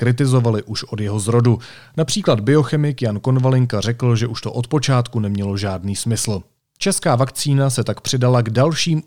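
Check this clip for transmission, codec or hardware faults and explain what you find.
Nothing turned up on a listen through this speech clip, so there's nothing here to flag.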